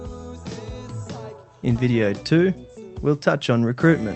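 Nothing is technically wrong with the audio; it has come through a WebRTC call path working normally, and the high end stops at about 8 kHz.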